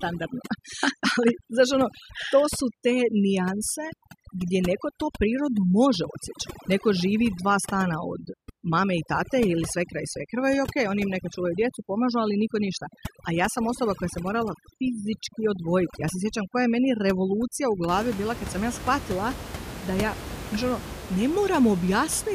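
Overdone noise removal runs from 0.0 to 17.88 s, ending just before "bila kad sam ja". Frequency bands near the room noise, about 12 dB below the speech, are pushed almost to silence, leaving twinkling specks.

A dropped buffer (overrun) is heard at 6.04 s where the sound jumps ahead. Roughly 10 ms seems missing, likely because samples were overwritten before being collected.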